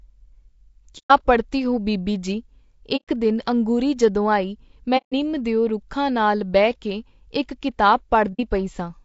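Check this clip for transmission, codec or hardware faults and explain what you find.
Two faults are audible in this speech: codec coloration throughout and four brief dropouts.

Low-delay AAC compression: a short-frame, low-delay codec (likely AAC-ELD, at a bitrate that fits about 32 kbps) can't resolve pitch harmonics finely. The voice sounds plainly rough and grainy for the whole clip.

AAC frame loss with muting: at 0.98–1.11 s (before "ਪੜ੍ਹਤੀ ਹੋ ਬੀਬੀ ਜੀ"), 2.96–3.09 s (before "ਦਿਨ ਅੰਗੂਰੀ ਜਦੋਂ ਆਈ"), 4.97–5.13 s (between "ਦਿਨ ਅੰਗੂਰੀ ਜਦੋਂ ਆਈ" and "ਦਿਓ ਰੁੱਖਾਂ ਨਾਲ ਬਹਿ") and 8.33–8.40 s, lost frames were decoded as silence. The overlapping windows fade the sound out and back in, leaving soft-edged holes of roughly 60–150 ms.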